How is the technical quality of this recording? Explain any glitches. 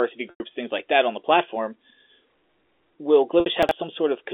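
The recording has three glitches on a G.711 A-law telephone line, which limits the sound to roughly 300 Hz to 3.5 kHz.

Packet loss with pitch repetition occurs at 0.30 to 0.40 s, lasting 100 ms, and at 3.40 to 3.46 s, lasting 60 ms. The receiver repeats the last pitch period, so the speech briefly holds with a buzzy tone.

Chunks out of order occur at 3.63 to 3.71 s. A 21 ms chunk plays about three chunks late. The speech sounds jumbled.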